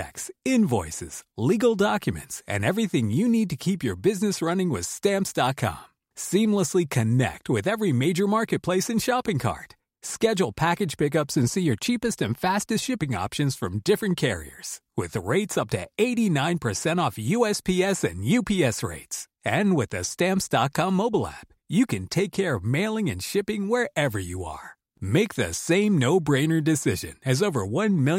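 No technical faults can be heard in this speech recording.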